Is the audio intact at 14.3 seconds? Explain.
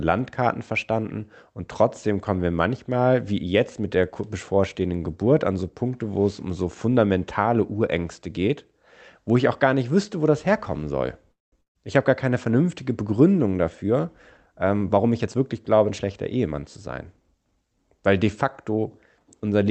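No. A jitter buffer speed-up runs from 14.18 to 15.35 s. The receiver's buffer had built up more audio than it targets, so it trimmed short slices of one or a few pitch periods many times in a row, removing roughly a fifth of a second in total. The speech plays at about 117% speed with its pitch unchanged, so that stretch sounds noticeably hurried.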